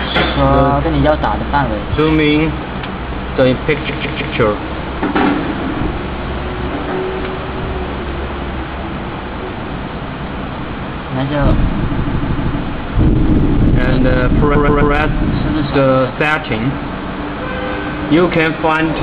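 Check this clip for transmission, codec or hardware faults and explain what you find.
Yes, there's a transmission fault: repeated frames at 3.88–4.35 s, 11.95–12.58 s and 14.54–14.93 s. A short block of compressed frames got played again, so the audio stutters. The block is about 157 ms replayed three times, then about 157 ms four times, then about 131 ms three times. Together they add roughly 1.5 s.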